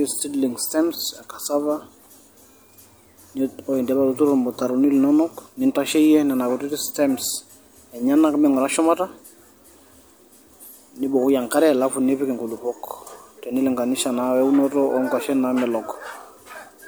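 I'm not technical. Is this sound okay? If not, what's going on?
Yes, the recording is technically sound, with no dropouts, distortion or other glitches to be heard anywhere in it.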